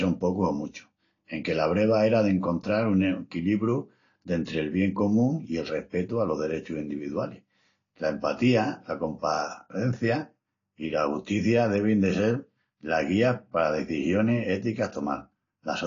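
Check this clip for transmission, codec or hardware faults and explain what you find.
One codec fault runs through the whole clip. It sounds like AAC compression, likely AAC-LC at a low bitrate around 32 kbps. Nothing remains above about 7.1 kHz, so the speech is dull. The encoder spends too few bits per frame, quantising coarsely and dropping the top band. Sibilants turn fizzy and smeared, with a warble on sustained sounds.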